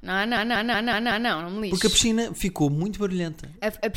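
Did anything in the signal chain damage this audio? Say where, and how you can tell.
Yes. From 0.37 s to 1.30 s the speech locks into a machine-gun stutter: one fragment about 186 ms long repeats five times at roughly 5.4 per second before normal speech resumes with "não me lixo", and little or no audio seems lost. This is a system hang loop at the driver or buffer stage. The host stalled while the audio hardware kept replaying the same ring buffer, whose length fits an 8192-sample buffer.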